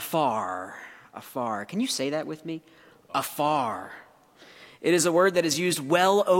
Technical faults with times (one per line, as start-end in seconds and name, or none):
none